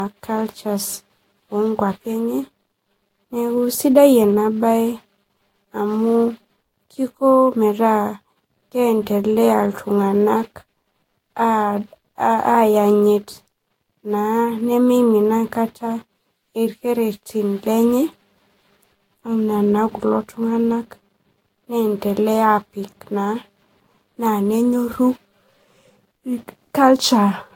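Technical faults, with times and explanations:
Throughout, generation loss, likely from repeated Vorbis re-encoding at around 62 kbit/s, about five passes. The speech sounds swirly, hollow and smeared, worse than one pass would leave it. Each pass adds fresh quantisation noise on a shifted frame grid. Attacks blur. Nothing remains above 16.6 kHz.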